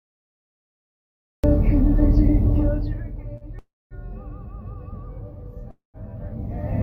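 The recording began late, a cut-off start: digital silence runs until 1.44 s, then the sound enters mid-event with no natural attack, abruptly switched on. At 3.37 s a late packet emptied the jitter buffer, a short stall; the last sound is held for about 34 ms, then resumes with nothing missing. From 3.59 to 3.94 s and again from 5.71 to 5.97 s there is a call audio freeze, likely from packets held up in transit draining the buffer. Each time, the final sound is drawn out as a fading buzz or hiss that drops into silence, for about 220 ms and 150 ms respectively, before the audio picks up where it stopped.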